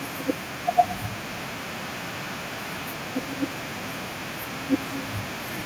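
From 1.3 s to 2.99 s there is feedback echo between two devices. Speech comes back at a gap of about 0.4 s, peaking about 11 dB below the original. One device replays the other's microphone feed, which is recaptured uncancelled. Unlike reverb, each return is a distinct, evenly spaced copy.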